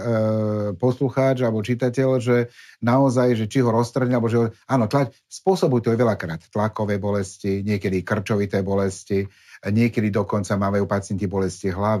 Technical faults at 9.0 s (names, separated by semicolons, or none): imaging from linear upsampling